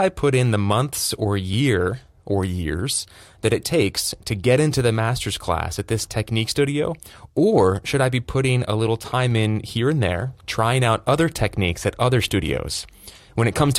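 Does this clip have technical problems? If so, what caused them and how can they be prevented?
Yes. An overlap between stream segments at 1.53 s, just after "in the months or", causes a tiny skip. Two segment timestamps claimed the same stretch, so the player trimmed roughly 15 ms of real speech at the boundary, with 6-second segments. Keeping segment timestamps contiguous when packaging, so each segment begins exactly where the previous one ends, prevents it.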